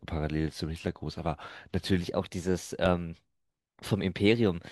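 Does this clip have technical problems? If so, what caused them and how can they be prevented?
Yes. At 0.88 s and again at 2.86 s the speech skips forward, with a tiny piece of sound, roughly 20 ms, gone and the two sides butted together without a gap. The two skips sit 2.0 s apart, which points to audio missing between chunks, likely from a recorder or processor dropping samples each time it hands over from one 2-second block to the next. Unlike a network dropout, the skips land on a fixed grid and leave no silence behind. The chunk handover should be fixed so each block overlaps or continues seamlessly into the next.

From 2.01 s to the end, the section plays at the wrong speed, running 1.12 times too fast, so the voice is both hurried and raised by about two semitones at once. Because pitch and tempo shift together from one instant onward, this is not a pitch-shifting effect, which would keep the timing, nor a time-stretch, which would keep the pitch. 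The likely cause is that part being played or resampled against the wrong clock rate. Every segment should be tagged and played at its true sample rate.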